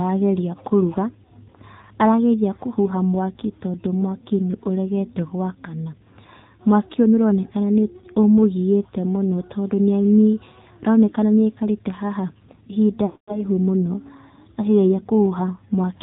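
Throughout, the AMR narrowband mobile codec at 7.4 kbps leaves speech band-limited below 4 kHz and buzzy and synthetic, unlike a simple low-pass filter's clean dullness.

From 13.06 to 13.44 s, lost AMR speech frames, about 220 ms missing, make the decoder stretch the last sound and fade it to silence. The speech then returns rough, unlike an abrupt dropout.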